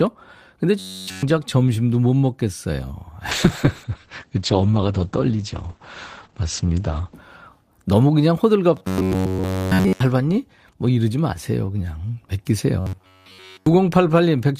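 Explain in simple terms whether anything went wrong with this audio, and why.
Three stretches sound robotic: 0.79 to 1.23 s, 8.77 to 10.0 s, and 12.8 to 13.67 s. This is robotic sound from repeated short buffers. The speech becomes a stiff, metallic buzz near 94 Hz. New audio likely arrived too late, so a tiny slice, about 11 ms, was replayed in its place.

From 3.32 to 7.21 s there is a call bitrate drop. The connection forced the encoder to save data. It coded the speech more crudely and cut everything above 8 kHz, so the voice turns muffled and rough until about 7.2 s.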